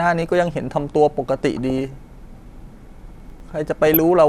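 Speech clip with DAB burbling at 1.57 to 1.93 s and again at 3.87 to 3.97 s: short noise blips where a fraction of a percent of bit errors slipped past correction into the MP2 sub-bands. Between 3.2 and 3.4 s you get chunks out of order, a jumbled moment where one piece plays a slot late, which fits 100 ms chunks being swapped.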